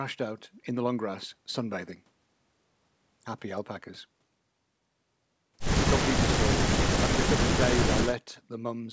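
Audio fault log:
No faults logged; the speech shows the expected wideband call-path band limit, with nothing above 8 kHz, consistent with G.722 coding and normal call microphone processing.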